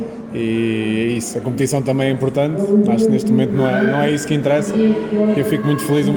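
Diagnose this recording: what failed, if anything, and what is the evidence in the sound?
Nothing failed; no faults heard.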